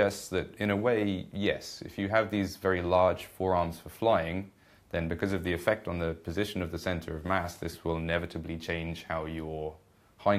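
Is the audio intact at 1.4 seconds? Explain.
Yes, the audio at 1.4 seconds is intact, with no dropout, click, distortion or other fault at that point.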